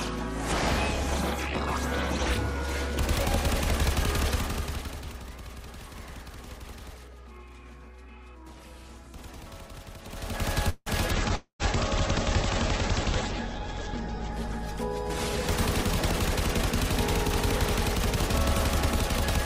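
At 10.69 s the audio briefly freezes into a fading buzz that trails into a short silence, about 0.2 s in all, then resumes exactly where it left off with nothing missing. This is a call audio freeze, most likely caused by packets held up in transit until the jitter buffer ran dry, so the receiver stretched the last sound and inserted a gap. From 11.14 s to 16.43 s the audio turns rough and muffled, with the top end gone. That is a call bitrate drop: the encoder fell from 64 kbps to 9 kbps, stayed at the lowest rate for nearly 3 s, and cut the audio bandwidth from 20 kHz to 8 kHz. Inside that stretch, at 11.28 s, playback lurches forward with barely a seam. That skip ahead dropped roughly 70 ms that was already queued behind the loss, splicing the two sides almost directly. Right after, from 11.35 s to 11.62 s, another fading buzz sinks into silence, and when the audio returns about 0.24 s of it is simply gone. 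That is a long network dropout, likely a run of packets that never arrived. From 13.50 s to 14.70 s the audio drags slightly, to 97% speed at unchanged pitch, as a jitter buffer slow-down repeats tiny slices to add 37 ms of reserve.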